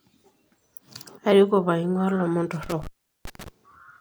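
Between 2.63 and 3.48 s the speech is disturbed by an intermittent contact. A loose plug or cable connection breaks and remakes, with the line open for a total of about 385 ms. The sound cuts out with a crackle at each edge, and a faint hiss remains while the circuit is open. That scratchy onset and the hiss are what separate it from a digital dropout, which falls into clean silence with abrupt edges.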